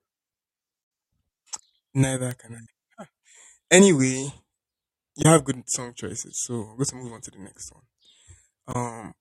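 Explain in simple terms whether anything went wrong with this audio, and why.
Three short glitches interrupt the speech, at 0.80 to 0.85 s, at 5.21 to 5.26 s just before "have good", and at 8.71 to 8.76 s. This is damaged data in a compressed stream. Part of the compressed file was corrupted, so the decoder misread those brief stretches and had to find its place again.

A single sharp tick sounds at 2.31 s, right before "can I". This is a bit error spike: one binary digit flipped in one sample, so that sample's value jumped suddenly and then snapped back.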